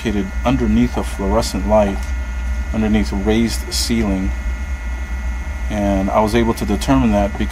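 No faults are audible anywhere in the recording.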